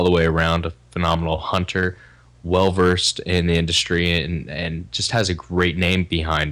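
Speech with hard clipping throughout. The signal is driven about 6 dB past what a stage can pass. Around one percent of samples are flattened, giving crackle on the loudest peaks.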